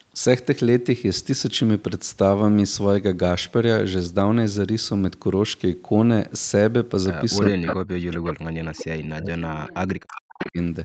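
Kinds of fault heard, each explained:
Speech suppressed in double talk: from 7.5 s, an echo canceller likely ducked the voice by up to about 40 dB.
Echo leak: five brief scraps of the voice return 410 ms late, about 5 to 15 dB quieter, likely via loudspeaker pickup, appearing as delayed spectrogram copies.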